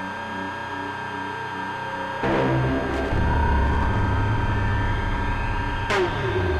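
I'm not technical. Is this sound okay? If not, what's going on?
No. A switching supply whistle runs through the whole clip: a thin, high tone around 1.6 kHz, wandering slightly between about 1.57 and 1.62 kHz. Unlike mains hum, which is a low, steady drone, this is a high whine from a switching power supply whose pitch drifts.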